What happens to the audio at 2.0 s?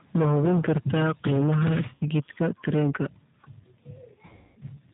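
From 1.95 to 2.04 s there is VoIP packet loss concealed by the speech codec. About 60 ms went missing, which fits two lost packets, and the G.729 decoder filled the gap by repeating its last pitch and filter at falling gain. The result is a brief buzzy tone or coloured noise that fades. On a spectrogram it shows as a flat, smeared stretch, and the waveform envelope decays before the sound recovers.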